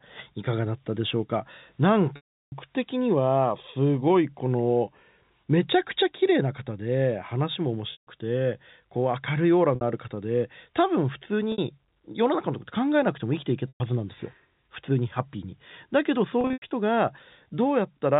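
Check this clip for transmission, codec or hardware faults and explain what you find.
Packet loss with pitch repetition occurs six times: 2.16 to 2.52 s, 7.92 to 8.07 s, 9.75 to 9.81 s, 11.52 to 11.58 s, 13.68 to 13.80 s, and scattered losses from 16.41 to 16.71 s. The gap lengths fit 30 ms packets. The receiver loops the last pitch period and fades it out over about 50 ms. The 60 ms gaps sound like a brief buzzy hold. The longer gaps fade to silence before the sound returns with a short cross-fade. In the waveform, each gap shows identical repeating cycles that decay to a flat line. In a spectrogram, harmonics run straight and steady, then drop away. The G.711 A-law path, working normally, still limits everything to below 4 kHz.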